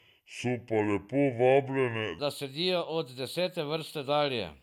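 Speech, with a section at the wrong speed from 0 to 2.19 s, slowed to 0.685x and about seven semitones deep, likely from a clock mismatch; tempo and pitch drop together, unlike pure pitch shifting.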